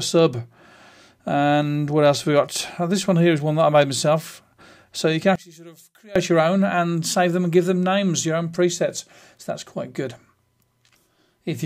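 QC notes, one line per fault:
5.36–6.16 s, one channel inverted: for about 0.8 s the centre of the mix collapses by about 24 dB, leaving a faint residue. The likely cause is one stereo channel flipping polarity, so material common to both sides cancels when summed. Unlike a dropout or gain dip, the sound doesn't go silent or shrink evenly. Only the difference between the channels survives.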